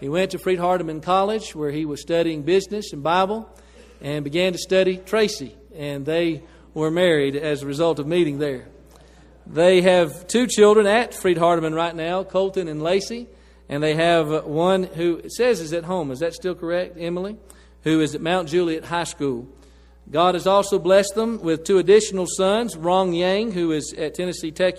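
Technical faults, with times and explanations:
No technical faults can be heard anywhere in the clip.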